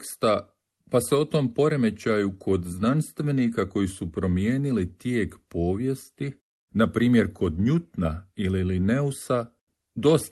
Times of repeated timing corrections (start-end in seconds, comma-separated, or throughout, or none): none